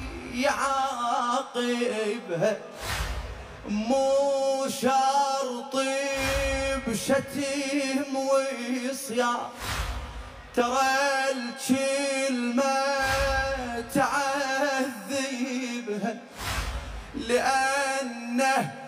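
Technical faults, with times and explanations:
Throughout, channel delay (comb filtering). One channel runs late by roughly 20 ms, and the two channels are summed to mono. Anything common to both cancels at evenly spaced frequencies. The first notch sits near 30 Hz, and further notches follow about every 50 Hz up the spectrum. The sound becomes rough and slightly doubled.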